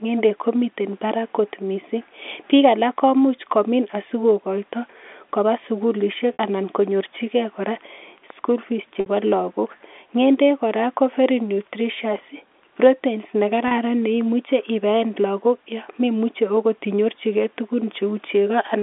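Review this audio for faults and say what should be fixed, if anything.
Packet loss with pitch repetition at 6.33 s (just after "koba sukulisiek"), 9.0 s and 13.68 s: gaps of 60, 60 and 30 ms bridged by a repeated, buzzy pitch period. Adding jitter buffering or forward error correction on the link would prevent these dropouts.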